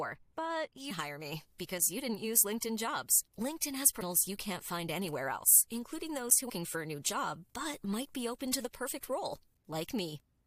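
From 0.77 s to the end, pre-emphasis is left on: the treble lift applied for recording or transmission, here matching the FM 75 µs curve, was never undone by the complementary de-emphasis. High frequencies stand about 13 dB above 1 kHz at 10 kHz, so the speech turns thin, bright and hissy on sibilants. A spectrogram shows the upper bands, especially above 3 kHz, glowing noticeably stronger from that point onward.

Damaged data in a compressed stream is heard at 0.90 s, 4.01 s and 6.48 s. Each time, corrupted bytes keep the decoder from reading a frame correctly, so it loses sync and skips ahead to find the next valid header. The result is a brief chirp or squawk. A waveform shows a short irregular burst or discontinuity, and a spectrogram shows a thin vertical smear across many frequencies.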